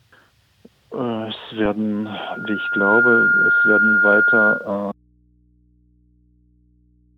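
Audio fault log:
4.92 s to end: audio dropout to a faint residue. The sound cuts off abruptly at 4.92 s and never returns. Only mains hum remains, roughly 40 dB below the programme level, likely from an open input that stayed live after the source was lost.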